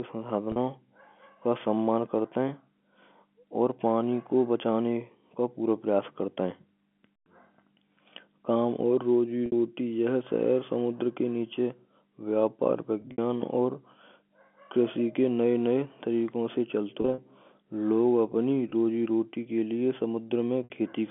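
Packet loss with pitch repetition hits at 0.52, 9.46, 13.02, 17.02, 18.70 and 20.64 s. The receiver repeats the last pitch period over each 20 to 60 ms gap, which sounds like a brief buzzy hold. At 13.02 and 17.02 s, several dropouts are scattered across 160 ms.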